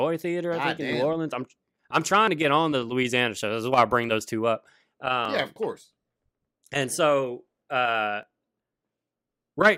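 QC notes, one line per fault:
2.28 s, 5.25 s, 8.23 s: audio missing between chunks. A brief skip, roughly 20 ms, lands after "I'm I'm trying", after "bring those two up" and after "so uh", with the surrounding sound butted together and no silence, so each reads as a small jump. The regular 3-second spacing points to a recorder or processor handling audio in 3 s blocks and likely dropping a sliver at each hand-over.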